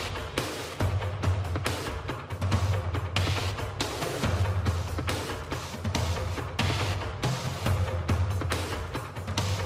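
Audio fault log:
No faults were found anywhere in the clip. Nothing in the audio calls for a timed entry.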